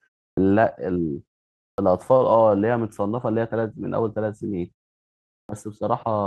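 Clipped starts after a pause occur at 0.33, 1.74 and 5.45 s in this speech recording. Each time, the output device appears to have dozed during the preceding silence (0.33 to 0.79 s long) and needed about 42 ms to wake, so the onset is swallowed and speech begins abruptly. A short stall from a late packet follows at 2.17 s. The jitter buffer ran dry and the receiver held the last sound for 39 ms until the packet arrived, producing a brief drawn-out sound with no content lost but timing shifted by 39 ms.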